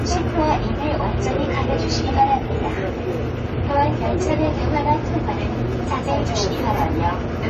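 AAC compression damage runs from start to finish, with nothing above 14 kHz, so the top of the sound is shut off and the whole recording turns dull. The likely cause is AAC-LC coding at a low rate, one that fits about 32 kbps. The encoder has too few bits to describe every frequency band, so it drops some and approximates others. The damage is plainly audible as smeared detail and a watery, fizzy texture on sustained sound.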